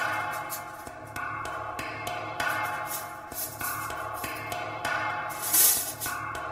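Throughout the clip there is channel delay (comb filtering). One channel arrives roughly 3 ms late, and summing to mono cancels shared content at evenly spaced frequencies, starting around 200 Hz. The result is a fixed hollow, phasey coloration with notches across the spectrum.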